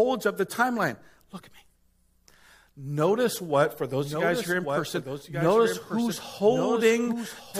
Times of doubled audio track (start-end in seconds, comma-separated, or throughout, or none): 3.93-7.59